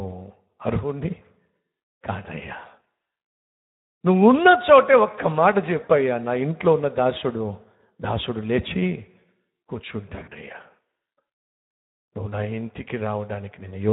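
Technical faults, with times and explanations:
Throughout, Speex codec: the sound is noisy and hoarse, which fits Speex at around 11 kbps starving the excitation of bits.
5.83–5.91 s, VoIP packet loss concealed by the speech codec: a brief smear fades away as the decoder stretches its last pitch and filter across about 60 ms of missing audio.
10.15–10.35 s, VoIP packet loss concealed by the speech codec: repeated weakened patches as about 100 ms of gaps, none longer than 40 ms, are concealed across roughly 160 ms.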